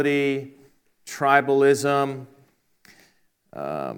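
No faults are audible anywhere in this audio, so there is nothing to time or attribute to a cause.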